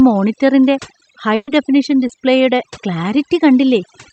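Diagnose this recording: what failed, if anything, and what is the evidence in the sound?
Throughout, the background drops and breaks up into twinkling specks. This is overdone noise removal in call processing: bands near the noise estimate are cut, taking quiet speech with them.

From 1.35 to 1.49 s the last sound is held and fades for about 120 ms, then resumes with about 120 ms missing. This is a burst of packet loss on the network, concealed by extrapolation.

Just after "ഹൈ ഡെഫനിഷൻ", from 2.07 to 2.11 s, there is a brief smear. This is short concealed packet loss: about 20 ms was synthesised from the preceding sound and blended back into the real audio.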